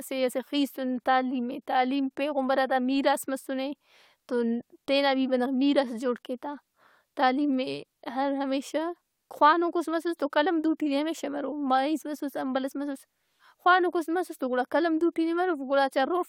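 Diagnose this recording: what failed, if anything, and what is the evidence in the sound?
Nothing in this speech recording points to a failure at any stage of the chain. There is no event in the sound to which a time or a mechanism could be attached.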